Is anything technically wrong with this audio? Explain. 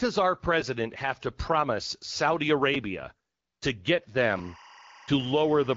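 Yes, there are two kinds of fault.

A repeated buffer occurs at 0.61 s, just before "have to promise", and again at 2.74 s. Each time a block of about 5 ms, which fits a 5 ms buffer, played twice more because fresh audio arrived late, dropping about 10 ms. It sounds like a click or brief buzz. The waveform shows identical copies butted together with hard joins, and the spectrogram shows a thin vertical broadband line.

Timecode bleed starts at 4.20 s, after "to get", and lasts to the end. Linear timecode at 24 frames per second leaks in from a nearby line at about 25 dB below the speech, switching between tones around 1 and 2 kHz. It is heard as a steady chirping warble. On a spectrogram it appears as alternating horizontal bands at those two frequencies.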